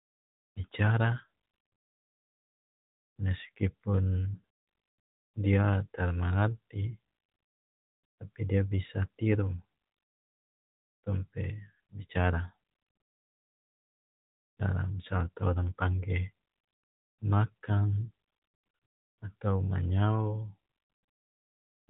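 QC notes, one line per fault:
4.34–4.43 s, lost AMR speech frames: roughly 220 ms of audio, about eleven 20 ms frames, drops out in patches across 320 ms. The decoder repeats the last good pitch and vocal-tract settings with falling gain, so the sound smears and fades over the longest 100 ms run, then returns briefly weak through the narrowband mobile codec.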